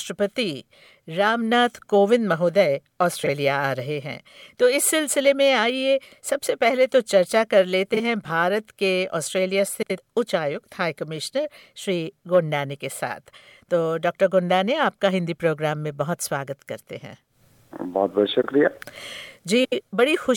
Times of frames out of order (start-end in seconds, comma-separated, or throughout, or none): 3.23-3.29, 7.94-8.00, 9.82-9.98, 18.42-18.47, 19.64-19.81